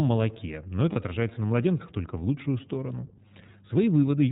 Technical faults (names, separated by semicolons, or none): iLBC codec; lost iLBC frames